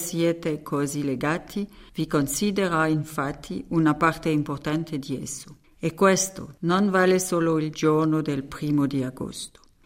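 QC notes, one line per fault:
No technical faults can be heard anywhere in the audio.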